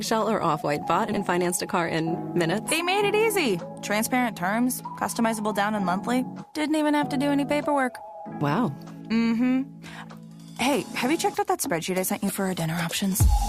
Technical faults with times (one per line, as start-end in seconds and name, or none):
1.08-1.19 frames out of order